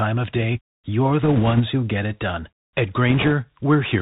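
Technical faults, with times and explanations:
Throughout: Bluetooth CVSD headset codec. The speech is carried as a single bit per sample at 64 kHz, each bit saying only whether the waveform steps up or down, and the step size adapts to keep up. That matches the 64 kbps link. Nothing above 4 kHz survives, so the sound is narrow and boxy. Loud high-frequency energy outruns the step and distorts. S sounds turn scratchy. A granular hiss sits beneath the speech, and the codec damage is plainly audible.
1.23 to 1.61 s and 3.09 to 3.32 s: bit errors on a Bluetooth voice link. In both stretches, bits on the headset link were flipped, at roughly 2 percent in the first and roughly 3 percent in the second. Each bit carries only a small step, and the decoder soon recovers, so no loud clicks appear. Instead a rushing, crackly noise rides over the speech. It is rougher in the second burst, where the error rate is higher.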